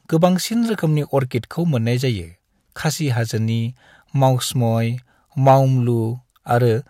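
At 5.48 to 5.54 s the speech drives a gain stage about 3 dB past the level it can pass, so the peaks are sheared flat in hard clipping. Those squared tops add high harmonics, heard as a short, gritty crackle on the peaks.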